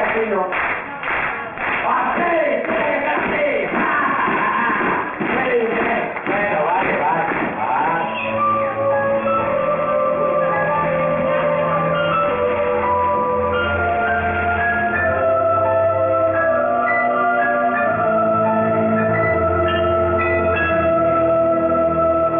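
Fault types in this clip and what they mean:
aliasing: The audio was brought down to a much lower sample rate without a proper anti-aliasing filter first, so content above the new Nyquist limit folds back into the band instead of being removed. Here everything is squeezed below about 3 kHz, which points to a rate near 6 kHz. Energy that belonged higher up reappears mirrored as unrelated tones, only around 15 dB under the wanted signal, giving a gritty, metallic edge throughout.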